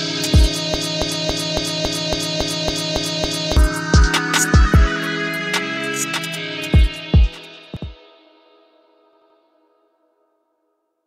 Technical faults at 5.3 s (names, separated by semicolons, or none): none